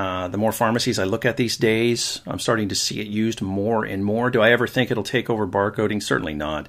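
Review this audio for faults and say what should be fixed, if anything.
Nothing in the speech needs fixing, as no technical fault can be heard anywhere in the recording. There is nothing here to correct or guard against.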